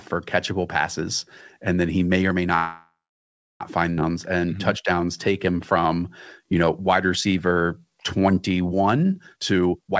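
At 2.56 s the speech stops and a call audio freeze fills the next 1.06 s, to 3.62 s. The last sound trails on as a fading buzz or hiss, then about 0.67 s of silence. Packets were likely held up and the jitter buffer ran dry. On a spectrogram this shows as smeared, decaying bands ending in a blank gap, and the waveform narrows to a flat line before the speech resumes where it left off.

Around 3.96 to 3.99 s comes a skip ahead. Roughly 0.7 s of speech is dropped, so the sound jumps forward through a join of about 11 ms. The waveform shows an abrupt seam, and the spectrogram shows unrelated formant patterns butted together.

From 4.12 to 9.14 s a jitter buffer slow-down stretches the audio to 91% speed, adding 483 ms by repeating pitch periods and pause fragments. Pitch stays put while syllables drag. The spectrogram shows harmonics elongated horizontally and stepped, repeated-looking cycles in the waveform.

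From 9.27 s to the end, a jitter buffer speed-up runs at 174%, cutting roughly half a second of pitch-period slices to shrink the delay. The speech sounds rushed at unchanged pitch. The spectrogram shows compressed, choppy formant tracks, and the waveform shows tightly packed syllables. Across the clip the spectral content stops at 8 kHz, consistent with a G.722 call codec.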